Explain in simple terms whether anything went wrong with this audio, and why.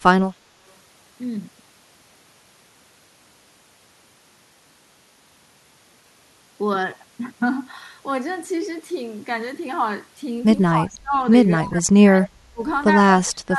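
Yes, two things went wrong. The first is speech suppressed in double talk: when both sides spoke at once, the echo canceller likely mistook this speech for echo and turned it down. The speech sinks sharply or drops out from 10.72 to 11.14 s, 11.63 to 12.61 s, and 13.23 s to the end.

The second is an echo leak: a loudspeaker's echo likely slipped past the canceller and was sent back. At 12.22 to 12.28 s a faint, brief copy of the speech arrives about a quarter of a second late.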